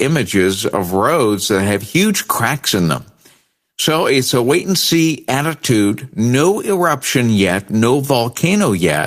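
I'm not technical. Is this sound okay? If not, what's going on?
Yes, I can't hear any technical fault in this speech recording. There's nothing here that needs fixing.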